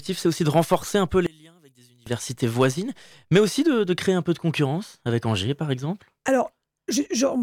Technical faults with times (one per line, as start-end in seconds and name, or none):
1.26-2.06 one channel inverted